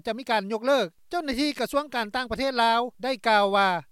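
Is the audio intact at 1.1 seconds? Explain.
Yes, at 1.1 seconds the audio is intact, with no dropout, click, distortion or other fault to be heard.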